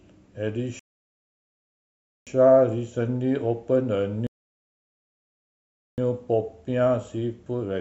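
The player's buffer ran dry twice, causing a rebuffering stall each time. From 0.79 to 2.27 s the speech halts into silence for 1.47 s, then picks up exactly where it stopped. The same happens from 4.27 to 5.98 s, a gap of 1.71 s. No speech is skipped or repeated. The delivery simply freezes mid-flow while more audio arrives, lengthening the clip by those pauses.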